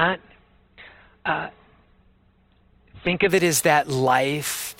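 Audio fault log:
0.0–3.3 s, adaptive stream starting at a low bitrate: the player opened on a low-bitrate rendition, likely around 12 kbit/s, then stepped up, so speech has nothing above 4.2 kHz and heavier codec artefacts until quality jumps cleanly without a gap.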